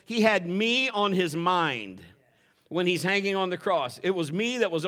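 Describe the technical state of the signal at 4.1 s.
At 4.1 s the speech signal is intact, with no technical fault present at that moment.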